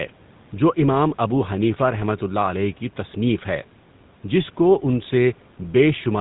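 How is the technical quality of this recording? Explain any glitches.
The quality is limited by one fault running through the whole clip: the GSM full-rate codec. The speech has a buzzy, gravelly roughness, and nothing remains above 4 kHz. That damage is plainly audible and fits the 13 kbps GSM full-rate codec. The codec models the vocal tract and excites it with evenly spaced pulses. It keeps only every third excitation sample. That coarse pulse drive produces the rasp. The call's microphone processing, which trims the deepest bass, is normal.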